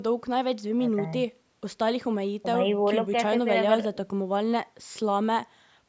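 Nothing here counts as a fault: the speech has simply been through a call's microphone processing, which trims the deepest bass and leaves nothing above 8 kHz, and that's just how such a path normally sounds.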